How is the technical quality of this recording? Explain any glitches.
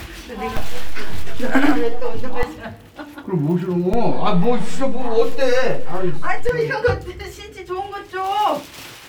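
The recording's quality suffers from two DC steps. At 0.57 s and again at 3.94 s, the waveform's zero line jumps by a fixed offset, about -11 dBFS and then about -12 dBFS, and it steps back at 2.43 s and 6.49 s. Each jump and return sounds as a low thump, while the sound itself carries on unchanged.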